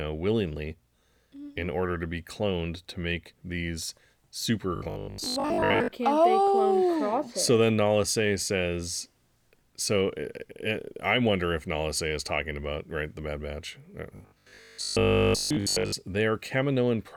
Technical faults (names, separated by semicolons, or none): robotic sound from repeated short buffers